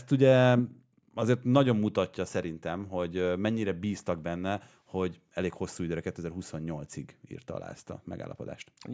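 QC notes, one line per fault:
No faults detected in this clip.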